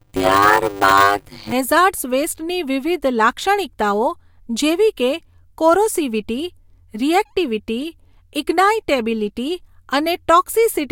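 From 0 to 1.53 s there is a block size mismatch (padded). One stage delivers blocks of roughly 256 samples into a stage reading larger blocks, and zeros fill each remainder. The speech carries a 100 Hz buzz and runs at 0.53 times normal speed, pitch largely unchanged.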